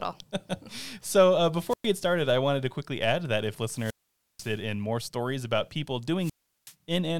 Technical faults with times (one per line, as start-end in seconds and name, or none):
1.68-1.87 wireless microphone squelch dropout
3.68-4.61 wireless microphone squelch dropout
6.19-6.74 wireless microphone squelch dropout